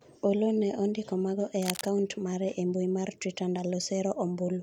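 From 1.62 s to 1.94 s, between "ne ondiko mago e" and "mare e mbui mar", cable scratch noise rides over the speech as a dense, uneven rustle roughly 10 dB below it, likely from a worn cable or connector being moved and its contact resistance fluctuating.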